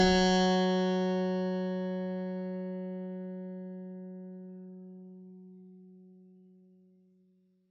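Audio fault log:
Throughout: HE-AAC compression. The music was likely squeezed through HE-AAC at a very low bitrate, with heavy damage that fits roughly 8 kbps. Only the lower spectrum is really coded; the treble is manufactured by copying lower bands upward and shaping them with a coarse envelope, and nothing survives above 8 kHz. The top end therefore sounds synthetic and gritty rather than natural, its harmonics not matching those below the crossover.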